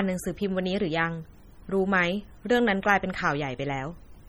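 Speech that sounds watery and swirly from start to finish, with dulled treble and smeared consonant attacks, points to heavy MP3 compression as the likely cause. At a low bitrate around 32 kbps, the encoder cuts the highs and lets weak frequency lines flicker between frames.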